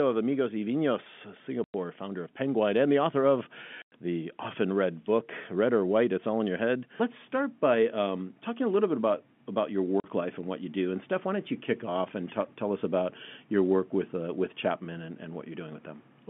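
Packet loss filled with silence: the receiver inserted silence in place of lost packets at 1.64–1.74 s (before "founder of"), 3.82–3.92 s (after "and the author of") and 10.00–10.04 s (after "bit about about your"). Gaps of 100 ms and 40 ms fit 20 ms packets, leaving hard-edged holes.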